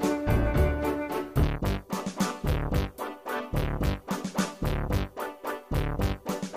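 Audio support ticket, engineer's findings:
No audible defect found in the clip. Nothing to attribute to any component.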